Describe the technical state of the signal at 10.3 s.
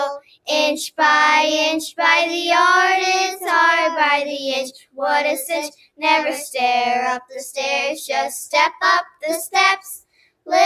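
The sound is cut by the noise suppressor from 10.01 to 10.48 s. It mistakes the sound for noise and pulls it down, dipping about 21 dB. Held parts and tails sink.

Underneath, a speech-style noise suppressor is active throughout. It treats steady tones and ambience as noise, so levels pump by a few decibels while attacks pass through.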